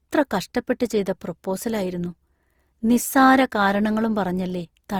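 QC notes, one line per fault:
Throughout, generation loss: the speech sounds swirly, smeared and hollow, with softened consonant attacks, more degraded than a single lossy pass would leave. This likely comes from several Opus encode–decode cycles at around 48 kbit/s, each requantising on a shifted frame grid, compounding noise and spectral holes.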